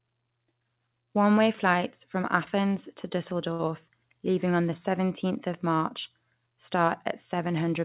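At 3.53 to 3.62 s the speech hangs on one sound for about 60 ms: a short stall from a late packet. The jitter buffer ran dry, so the last sound was stretched until the packet arrived, then the speech resumed where it left off, with nothing lost but everything after it running 60 ms late. On a spectrogram the harmonics run flat and unchanged across that stretch, all sitting below the 4 kHz ceiling that points to a narrowband call codec. The waveform shows the same cycle repeating.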